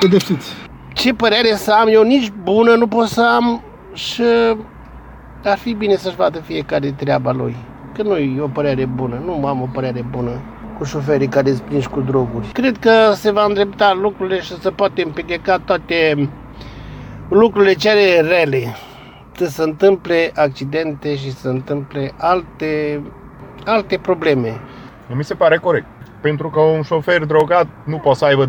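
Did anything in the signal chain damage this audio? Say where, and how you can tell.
Yes. At the network and jitter-buffer stage there is clock drift between sender and receiver: the sender's clock runs roughly 4 percent fast, so the receiver's buffer keeps filling faster than it empties for the whole clip. The sound carries small, irregular timing hiccups throughout.

To stop the buffer overflowing, the receiver makes repeated timing corrections from 0.13 s to 28.31 s, discarding short pieces as it goes. This keeps effective playback at 104 percent speed, heard as a slightly hurried, unevenly spaced tempo with faint skips.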